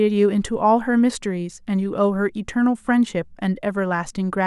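No dropouts, clicks, distortion or timing faults turn up anywhere in this speech recording.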